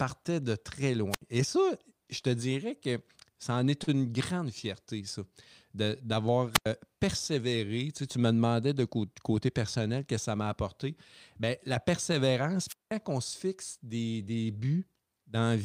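At 1.10 s the speech hits a wireless microphone squelch dropout. The radio signal fades, hiss rises briefly, and the receiver's squelch mutes the output for about 71 ms. Then the voice returns. The same fault comes back at 6.53 s, after "grande fierté ça d'avoir", with a hole of about 94 ms. It is longest at 12.67 s, after "la persévérance" and before "on se fixe des", where the silence lasts about 191 ms before the sound comes back.

At 3.83 s, between "que ça en est" and "une grande fierté ça", a packet arrives late. This is a short stall from a late packet. The jitter buffer runs dry, so the receiver holds the last sound for 40 ms until the data turns up. Nothing is lost. The moment simply hangs, slightly drawn out, and playback then sits 40 ms later than before.

From 8.97 to 9.31 s the jitter buffer speeds up playback. Too much audio has built up, so the receiver trims small pitch-period slices again and again, roughly 40 ms in all. 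Speech runs at 109% speed over that stretch. The pitch stays the same, but the delivery sounds briefly rushed.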